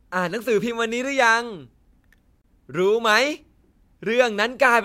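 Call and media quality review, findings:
Gap at a join of encoded pieces, 2.42–2.44 s: 28 ms silence cuts into continuous speech, edges smeared by the codec, sound resumes where it stopped. Probable component: segment concatenation. Separately encoded pieces joined untrimmed, so encoder start delay and last-frame padding remain.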